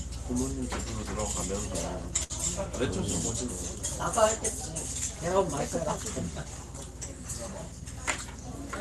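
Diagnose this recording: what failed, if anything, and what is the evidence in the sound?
From 2.23 to 2.33 s the sound stops moving forward: the moment just before is stretched into a held buzz or fading hiss for roughly 60 ms, then the audio jumps ahead with about 60 ms missing. This is a burst of packet loss at the network stage of the call path. Consecutive packets never arrived in time, so the receiver's concealment extended and attenuated the last decoded audio before resuming, its top end limited to about 12 kHz by the Opus call codec.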